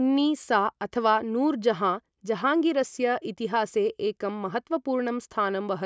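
No dropouts, clicks, distortion or timing errors are audible anywhere in the speech.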